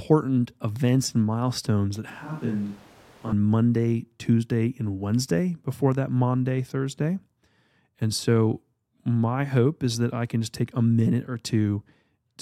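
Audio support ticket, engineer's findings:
Close-mic feed likely dropped, recording falling back to a distant microphone, 2.10–3.33 s, right after "events and milestones that". Sudden switch both ways. Speech turns roomy and hollow, thinner low end, level down about 5 dB, room noise rising to roughly 20 dB under speech. Distant pickup captures more reflections than direct sound.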